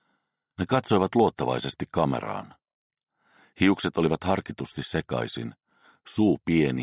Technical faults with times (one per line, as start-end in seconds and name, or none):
none